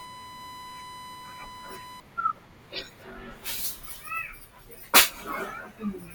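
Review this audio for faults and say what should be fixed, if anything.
USB whine from 0.0 to 2.0 s: a steady 1 kHz tone sits roughly 10 dB below the speech, the pitch of the bus's 1 ms frame rate, as its current draw leaks through shared power or ground into the audio path. Prevent it by powering the interface separately or fitting a USB ground-loop isolator.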